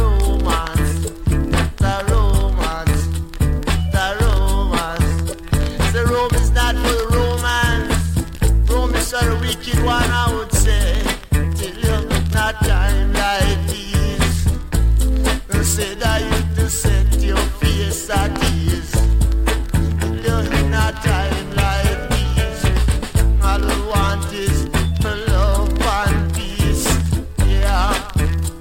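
At 4.75 to 4.77 s, lost LE Audio frames: about 15 ms of audio is missing, consistent with two lost frames, and the decoder patches the gap with a brief noisy smear.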